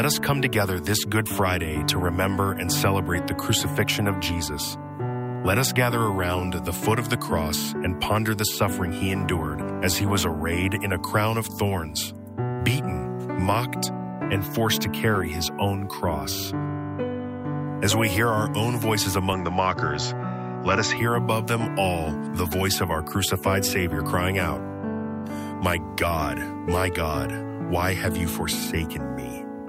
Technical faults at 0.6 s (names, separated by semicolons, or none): none